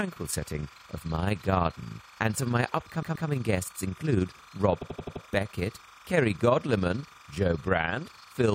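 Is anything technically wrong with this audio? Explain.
Yes, three faults can be heard.

Throughout the clip, a steady chirping warble sits about 25 dB under the sound, flipping between pitches around 1 and 2 kHz. This is timecode bleed: linear timecode at 30 frames per second, a square wave, leaking in from an adjacent track or cable.

Also throughout, the level pumps roughly 20 times a second with a depth of about 6 dB, giving a rough flutter. This is overlap-add ripple: the audio was split into windowed frames and rejoined with an overlap whose gains don't sum evenly.

From 3.02 to 3.27 s, a 128 ms block plays two extra times, and from 4.81 to 5.24 s an 85 ms block plays five extra times. Both are heard as stutters. These are repeated frames, where the decoder received the same compressed frames again. They add about 256 ms and 427 ms respectively.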